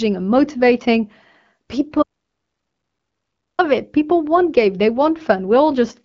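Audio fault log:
2.03 to 3.59 s, audio dropout to silence: input likely lost while the recorder kept writing zeros, so speech cuts off for 1.56 s with no room tone.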